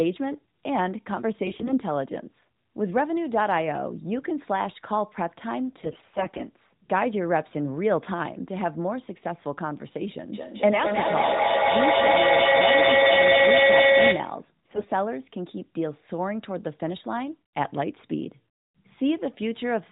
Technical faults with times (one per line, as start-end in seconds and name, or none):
1.45-1.74 AMR bit errors
5.82-6.42 AMR bit errors
10.33-14.48 feedback howl
10.72-10.84 AMR bit errors
14.66-14.87 AMR bit errors